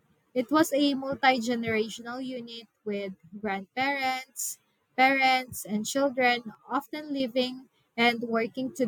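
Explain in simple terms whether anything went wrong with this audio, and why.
Something did go wrong: the speech suddenly drops to about half its level from 1.99 to 4.39 s, recovering right before "parents and", and again from 6.55 to 7.20 s. That's likely one channel drops out, with one side of the stereo signal briefly lost.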